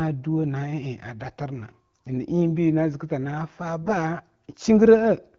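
At 3.83 s, right after "na zika tana fa", AMR bit errors break up the speech for about 0.1 s, which fits roughly five consecutive 20 ms frames. The weakly protected bits in those frames arrive flipped, around one bit in ten, while the checks on the core bits still pass. Excitation pulses land in the wrong positions and the fine gain, pitch and spectral values drift. Pitch and loudness roughly hold, but the passage turns hoarse and gargly. Around it, the AMR wideband codec adds only light coding colour, consistent with its 12.65 kbit/s mode.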